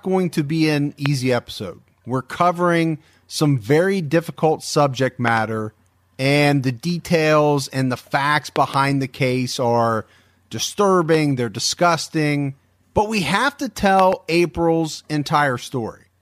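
Sharp loud pops, roughly 15 dB above the speech, cut in while the speech carries on underneath. Single pops land at 1.06 s and at 11.14 s, just before "they're disgusting but we". Quick double pops fall at 5.28–5.39 s after "some very difficult subject", at 8.56–8.76 s, and at 13.99–14.15 s after "but we have to". Each is likely a sudden voltage pulse from a plug, switch, static discharge or driver glitch that entered the signal chain.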